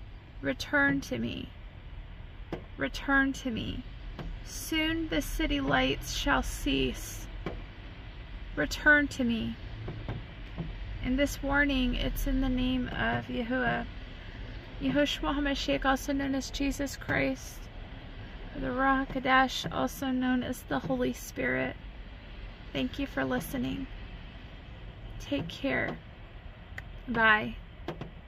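No audible faults anywhere in this recording.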